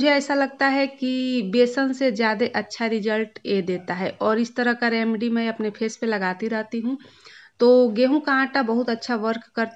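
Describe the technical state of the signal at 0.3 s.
At 0.3 s the signal is intact, with no audible fault at that point.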